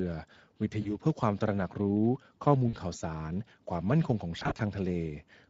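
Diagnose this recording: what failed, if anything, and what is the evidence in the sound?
Speex codec, throughout the whole clip: the codec stage is at fault. The speech has a plainly audible hoarse, noisy grain. This is CELP coding that has too few bits left to describe the excitation, so the fine harmonic detail is replaced by approximate, noise-like pulses. The degree of roughness points to a medium-low setting, which fits a Speex mode of about 16.8 kbps.

VoIP packet loss concealed by the speech codec occurs at 0.81 to 0.92 s, 2.69 to 2.75 s and 4.39 to 4.62 s, and the failure is in the network stage. In the first two places, about 40 ms of sound is lost, which fits two 20 ms frames. The decoder fills each gap by repeating its last pitch and filter, so the speech smears into a brief stretched sound that fades. Because each rebuilt frame feeds the next, the speech stays weak or distorted for tens of milliseconds or more after packets return. 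Around 4.4 s the damage is heavier. About 100 ms goes missing in scattered bursts over roughly 200 ms, with no single gap longer than 40 ms, so the sound flutters repeatedly instead of dropping out once.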